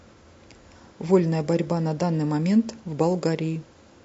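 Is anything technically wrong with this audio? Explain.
Yes. Throughout the speech, the voice sounds rough and grainy, with plainly audible codec damage. This is likely low-delay AAC compression. Its short frames resolve pitch harmonics poorly. At a rate consistent with about 32 kbps, noise fills between the harmonics.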